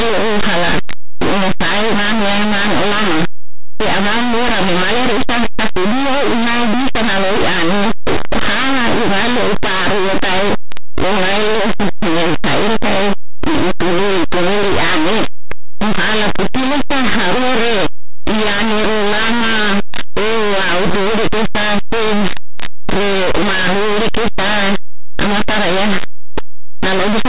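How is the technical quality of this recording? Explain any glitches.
Poor. The whole recording is buried in very loud, harsh distortion. The cause is linear audio read as companded. Plain linear 8-bit samples are being decoded as mu-law codes. Small values just one side of zero jump to the loudest outputs, while the other side stays tiny. The speech sounds harsh and distorted from start to finish.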